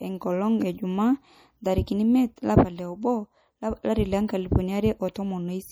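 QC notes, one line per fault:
Throughout: MP3 compression artefacts, and pretty obvious ones. The sibilants come out swirly and a bit metallic, with little chirps where quiet high detail keeps dropping in and out between frames. Attacks are smeared too. The likely cause is a low-bitrate MP3 encode. The encoder runs short of bits, so it zeroes weak frequency lines, which fits something around 48 kbps.
2.36 s: pre-echo. A short hiss of about 14 ms comes just ahead of a sharp onset, and the attack itself lands soft instead of crisp. The transient falls late in a transform block, so the coding noise sized for the loud part gets spread across the whole block, including the quiet stretch right before the hit. That's why you hear the smear arrive a moment before the sound does.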